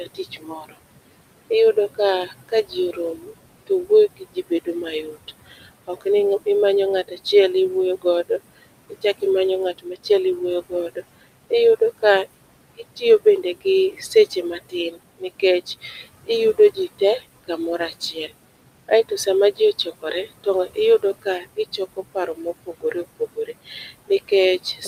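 Throughout the clip, noise suppressor artifacts come from a suppressor pulling the steady room noise down by about 20 dB, frame by frame, from a background that sits about 15 dB under the speech. The residue pumps between phrases and rises under the voice, leaving a thin, watery edge.

The same processing repeatedly mistakes speech for noise. This speech cut by the noise suppressor comes at 0.04–0.78 s, 1.5–6.47 s, 8.02–9.23 s, 9.78–10.1 s, 10.7–18.32 s and 18.88–24.87 s. Drops reach about 17 to 21 dB, lasting from a fraction of a second to over a second in total per stretch, so soft consonants and word endings sound swallowed or faint.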